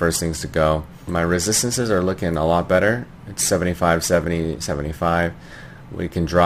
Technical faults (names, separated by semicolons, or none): crude rate conversion